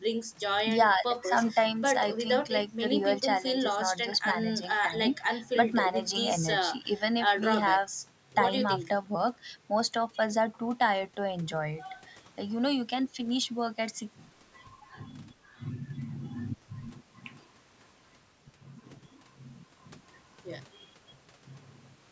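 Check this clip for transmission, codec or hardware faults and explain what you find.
No transmission, codec or hardware faults are audible in this speech, which shows only the normal signature of call microphone processing: low bass trimmed by its high-pass filter and no content above 8 kHz.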